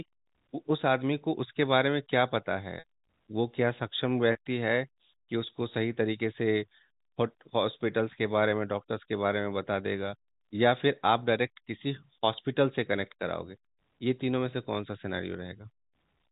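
Packet loss with pitch repetition hits this speech twice. From 2.79 to 2.84 s about 60 ms of audio went missing, which fits two lost packets, and the receiver filled the hole by replaying the last pitch period. This gives a brief held, buzzy tone before the speech resumes. At 4.32 to 4.35 s a shorter 30 ms loss, consistent with one packet, is bridged the same way and sounds like a slightly held buzz. Both gaps sit within band-limited G.711 telephone audio.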